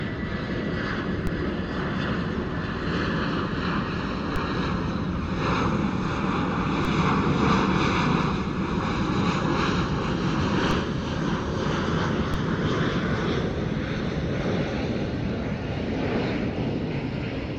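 Five DC steps land at 1.27, 4.36, 6.85, 10.71 and 12.34 s. Each time, the zero line jumps by about -16 to -18 dBFS and bleeds away through a 20 Hz high-pass, so you hear a low thump while the sound carries on.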